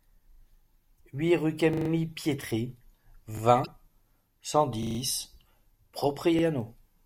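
At 0.32 to 0.40 s the speech stutters: the same 40 ms slice plays three times with a hard join at each repeat. That is a repeated buffer, where the device replays its last block when fresh audio arrives late. Unlike the blips below, what repeats is real speech, and nothing is skipped.

At 0.96 to 1.01 s, just before "huit rue", a brief glitch cuts in. This is damaged data in a compressed stream. The decoder misreads corrupt frames and resyncs at the next header, so the sound is a foreign glitch, not a repeat.

The repeated buffer returns after "huit rue" at 1.73 to 1.89 s, where one 40 ms piece plays five times for a longer stutter. Another single repeat follows at 3.37 to 3.41 s. More damaged data gives a second glitch at 3.62 to 3.68 s. Further repeated buffers come at 4.83 to 4.99 s (five plays) and 6.39 to 6.43 s (one repeat), all consistent with a 40 ms buffer.

At 6.61 s a bit error spike gives one sharp, broadband tick. 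A single sample jumps by a power of two and returns. It is far shorter than any stutter and unrelated to the speech.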